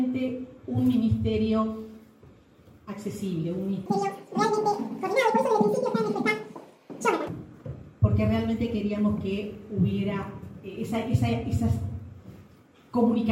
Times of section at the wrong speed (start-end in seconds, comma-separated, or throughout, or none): 3.86-7.28